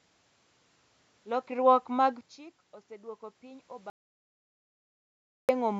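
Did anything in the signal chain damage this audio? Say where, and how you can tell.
Yes. An audio dropout to silence runs from 3.9 to 5.49 s, right after "mag chik osedwoko piny": about 1.59 s of silence with no room tone, then speech resumes abruptly. That points to a likely lost input link at the capture stage, with the recorder writing silence.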